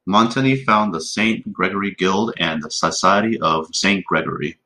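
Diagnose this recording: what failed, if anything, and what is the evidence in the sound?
Nothing here failed: the speech holds together the whole way, with no dropouts, clicks, distortion or level jumps to point at any stage of the chain.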